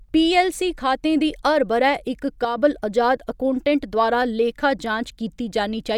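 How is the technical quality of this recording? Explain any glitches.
The speech has one brief level glitch. From 2.45 to 2.58 s, between "ब'रै इक" and "अजाद अकौटेंट्ट द्वारा लेखा", the level drops abruptly by about 6 dB, likely one channel dropping out so the mono sum loses half its shared signal.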